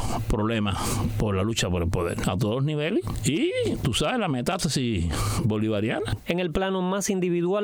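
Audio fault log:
No faults heard anywhere in the clip; nothing to log.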